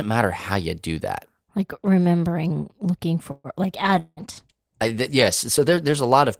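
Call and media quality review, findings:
Call audio freeze, 3.31 to 3.47 s. Likely jitter buffer underrun from delayed packets. Last sound extended as a fading buzz for about 130 ms, ending in brief silence. Playback resumes where it stopped; no content lost, delay grows by 129 ms.

Call bitrate drop, 3.85 s to end. Bandwidth estimate fell; Opus encoder rate cut from 32 to 15 kbps, lowest for about 1.2 s. Coarser coding makes the audio rough and watery, with high frequencies dulled.

Long network dropout, 3.99 to 4.20 s. Likely packet loss burst. Concealment fills with a decaying buzz for about 170 ms, then a short silence. Audio returns with 180 ms skipped, so the sound jumps forward.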